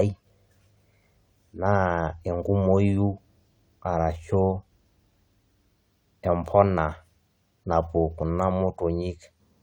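No dropouts, clicks, distortion or level jumps turn up anywhere in the recording; nothing to flag.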